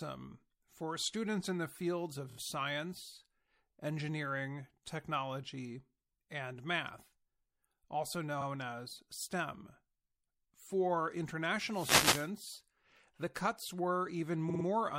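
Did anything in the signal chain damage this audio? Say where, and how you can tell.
Yes. At the codec stage, the whole clip has watery, swirly treble and smeared consonant attacks, likely from MP3 compression; the plainly audible damage fits a 64 kbps encode. A spectrogram would show a hard treble ceiling and high-frequency patches flickering on and off between frames.

Repeated frames, a storage or network fault, cause stutters where the same block plays again. The first falls between "students in the fields" and "science engineering technology and" at 2.29–2.37 s: a 26 ms block plays three extra times, which fits a single frame. A 52 ms block repeats once at 8.40–8.45 s, and another repeats three times at 14.49–14.64 s. On the waveform, identical stretches sit back to back.

A wireless microphone noise hit on the analogue radio link covers 11.70–12.31 s with a short swish of static as the FM signal fades and receiver noise rises. 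A spectrogram shows a broadband noise smear over that span, and the waveform shows hiss filling the gaps.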